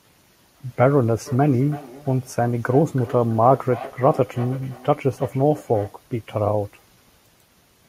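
From 1.26 to 6.01 s, feedback echo between two devices returns the speech at a fixed interval of about a third of a second, about 18 dB down: discrete repeats rather than smeared room reverberation.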